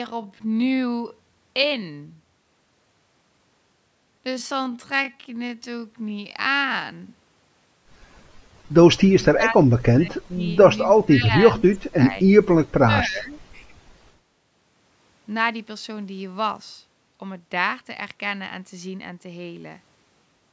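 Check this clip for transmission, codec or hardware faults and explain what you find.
Two problems stand out, both in the first 14 seconds, over audio that's been through call microphone processing with nothing above 8 kHz.

From 0.0 to 14.36 s there's a time-stretched section, running at about 0.57 times normal speed. The pitch holds, but it drags, likely because software padded it out by repeating short slices.

Then there's speech suppressed in double talk, likely from an echo canceller that couldn't tell the talker from the far side and ducked both. The voice drops by about 30 dB at 9.14–10.48 s, 11.94–12.29 s and 12.49–13.55 s, and by about 10 dB at 10.87–11.78 s, dipping and breaking up in patches.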